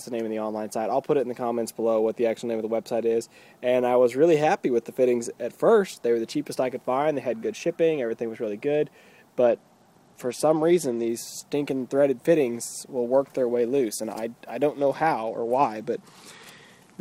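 At 9.45 s the treble dulls and a gritty noise creeps in until 11.10 s, then the same happens from 14.79 s to the end at 17 s. Both are a Bluetooth SBC bit pool drop: a congested link forced the encoder to starve its sub-bands, which points to the bit pool falling from about 28 to 12, near 96 kbps. On a spectrogram the upper bands go blank or patchy, with grainy noise filling the rest. The waveform shows little change.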